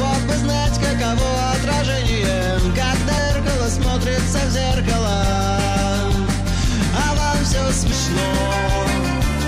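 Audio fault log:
3.17 s and 7.91 s, damaged data in a compressed stream: at two points the compressed bytes reaching the decoder were corrupted, so it could not read the frames there correctly, lost its place in the stream and had to hunt for the next valid frame header before carrying on. Each lapse lasts under 20 ms, so it comes across as a brief chirp, click or short hole.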